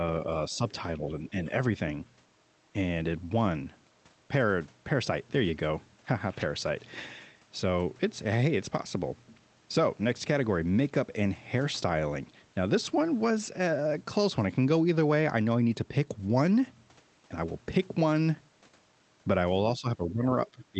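At 1.21 to 1.52 s the speech dips slightly, then from 19.77 s to the end it falls much further, around 15 dB down. This is likely speech suppressed in double talk, with the echo canceller ducking the talker while the far side speaks.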